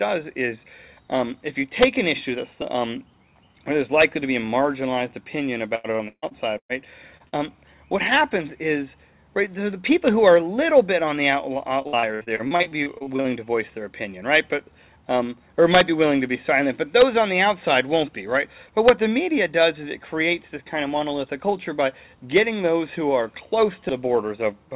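From 5.75 to 6.72 s there is repeated packet loss (robotic sound): five dropouts, the longest 144 ms, each patched by extending the preceding audio, so about 41% of the stretch is synthetic fill. The result is choppy, with pieces missing.

Two short concealed packet losses follow, at 7.17 to 7.23 s and 7.29 to 7.35 s, each about 30 ms of missing audio. The receiver bridges each hole by continuing the last sound and crossfading back, which leaves a brief smear or wobble.

From 11.82 to 13.27 s the repeated packet loss returns in a denser pattern of fifteen shorter gaps, none longer than 59 ms, with about a third of the span concealed. The sound again turns choppy, with pieces missing.

Throughout, nothing above 4 kHz is present, which fits a 64 kbps G.711 mu-law call path.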